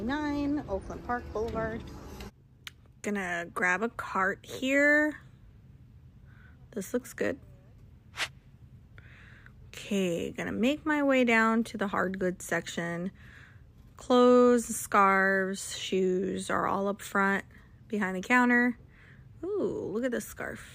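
No technical faults can be heard anywhere in the recording; the signal stays intact and continuous throughout.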